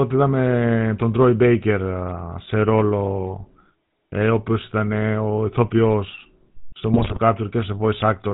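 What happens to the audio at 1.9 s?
At 1.9 s the speech carries GSM full-rate codec damage, present throughout the clip. Nothing passes above 4 kHz, and a vocal-tract model driven by sparse, regularly spaced pulses gives a plainly audible buzzy, gravelly roughness. A simple telephone band-limit would sound muffled but smooth.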